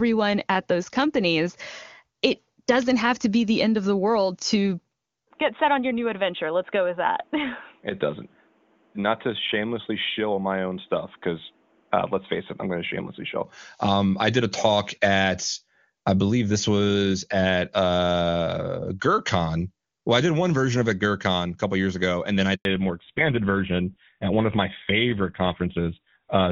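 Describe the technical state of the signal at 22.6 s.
A handover gap runs from 22.55 to 22.65 s, right after "ago and then I". For 100 ms no speech frames reach the decoder while the call moves between networks, so the sound dies away within a few tens of milliseconds and leaves true silence. Whatever was said in that tenth of a second is gone. On a waveform this appears as a short fade into a flat, near-zero stretch; on a spectrogram it is a clean vertical blank band across all frequencies.

From 22.65 s to the end, a fallback to narrowband follows. Before the switch the wideband AMR-WB path carries a full, clear band, consistent with its top rate of 23.85 kbit/s. Afterwards the decoded sound loses everything above 4 kHz, which fits a drop to GSM full-rate coding at 13 kbit/s. The voice turns duller, boxier and rougher. A spectrogram shows energy that reaches about 7 kHz on the left, then is sharply capped at 4 kHz from 22.65 s onward.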